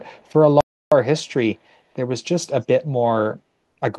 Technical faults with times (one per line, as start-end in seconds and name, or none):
0.17-0.24 echo leak
0.61-0.92 audio dropout to silence